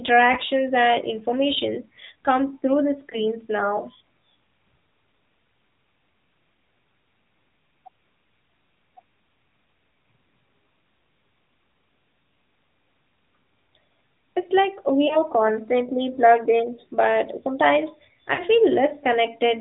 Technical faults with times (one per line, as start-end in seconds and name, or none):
0.00-19.61 AMR narrowband mobile codec
0.34-0.38 lost AMR speech frames
3.10-3.18 lost AMR speech frames
15.08-15.17 lost AMR speech frames
18.34-18.42 lost AMR speech frames